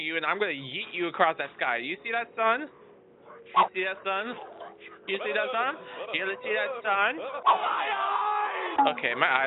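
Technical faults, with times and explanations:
No technical faults can be heard anywhere in the audio; the signal stays continuous and steady from its opening moment to its last.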